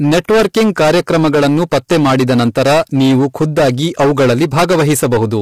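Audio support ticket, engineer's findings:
Hard clipping throughout: gain stage overdriven by about 18 dB, roughly a fifth of samples cut flat. Flat-topped peaks add high harmonics, so speech carries fuzzy distortion on every loud syllable.

Codec damage throughout, likely low-delay AAC compression (AAC-ELD) at a rate that fits about 32 kbps. Speech sounds rough and grainy, with noise between harmonics and nothing above 15.6 kHz.

Pre-echo at 0.75 s: block quantisation noise spread ahead of a sharp attack, about 10 ms. A brief hiss precedes the onset, which sounds smeared.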